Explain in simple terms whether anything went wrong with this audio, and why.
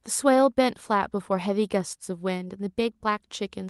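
Nothing went wrong here.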